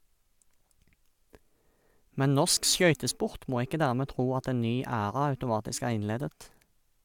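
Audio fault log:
Nothing to log here, as this speech clip has no faults worth noting anywhere along the way.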